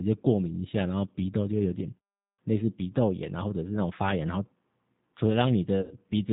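Right from the start the whole thing has that G.729 codec sound, pretty clearly audible. Everything above 4 kHz is gone, so the speech feels boxed-in, and there's a slightly rough, synthetic edge because the decoder rebuilds each 10 ms frame from a vocal tract filter, a pitch guess and a handful of pulses. That character fits G.729A at 8 kbit/s.

Near the end, from about 5.81 to 5.96 s, you get VoIP packet loss concealed by the speech codec. Roughly 100 ms of audio never arrived, so the decoder kept stretching its last pitch and filter while turning the gain down. It comes out as a short smear that fades, and because each frame leans on the one before, the sound stays a bit weak and off for a moment after the real audio comes back.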